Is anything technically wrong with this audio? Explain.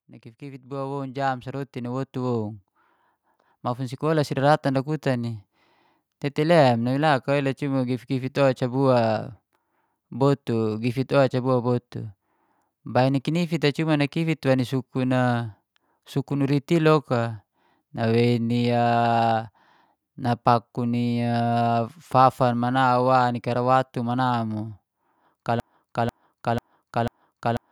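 Yes, there are two faults in this speech clip.

From 0.05 s to 5.43 s there is automatic gain rising. The gain control judged the input too quiet and raised its gain step by step, by about 13 dB in all. The voice and the background noise swell up together instead of the voice alone getting louder. On a waveform the envelope widens steadily over those five seconds, and on a spectrogram the noise floor brightens along with the speech.

From 25.6 s to the end there is a broken-record loop. A 0.49 s fragment repeats exactly, back to back, four times, and whatever should have played there is gone. This most likely comes from the player, encoder or stream stalling and resending the last piece it held. It sounds like a stuck, stuttering repetition. A waveform shows identical blocks tiled every 0.49 s, and a spectrogram shows the same pattern copied side by side.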